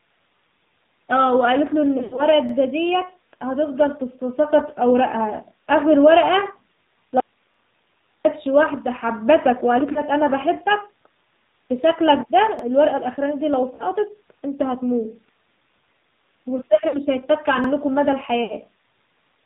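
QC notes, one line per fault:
throughout, AMR narrowband mobile codec: nothing above 4 kHz, with a buzzy, synthetic voice typical of a low rate near 7.4 kbps. It is an even band limit, not intermittent damage.
1.98 to 2.23 s, lost AMR speech frames: about 120 ms is missing across 0.2 s, in runs up to 80 ms. The decoder stretches the last sound and fades it, giving a smeared warble rather than a hard gap.
9.92 s, 13.75 s, 16.89 s and 18.44 s, lost AMR speech frames: brief dips or warbles of about 40 ms, and about 60 ms at 18.44 s. They are smoothed over rather than clicked, unlike the chunk joins.
2.49 s, 7.54 s, 12.59 s and 17.64 s, overlapping chunks: a 50 ms piece plays twice at each join, one every 5 s. It is heard as a regular stutter, not a fade.
7.2 to 8.25 s, audio dropout to a faint residue: the sound cuts abruptly for about 1 s, leaving only hiss about 40 dB down. This is likely a lost signal on a path that stayed live, distinct from a pause or a concealment fade.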